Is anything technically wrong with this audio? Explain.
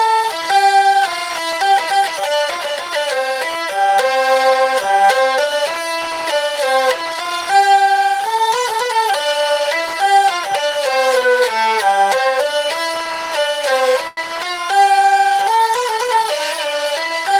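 Yes, there are two network-playback problems, both near the end.

From 14.07 to 14.19 s there's a short stall from a late packet. The next chunk of audio didn't show up on time, so the jitter buffer ran dry and the receiver stretched the last bit of sound for about 97 ms to cover the gap. Nothing gets skipped. Playback just picks up where it left off, about 97 ms behind. You hear a sound held a touch too long, with a faint buzzy or dipped quality.

Then, from 16.15 to 17.38 s, there's a jitter buffer speed-up. The buffer ended up holding more audio than it wants. To catch up, the receiver kept snipping out tiny pitch-period-sized slivers, dropping roughly 40 ms in total. The pitch stays put, but the audio runs about 3% fast.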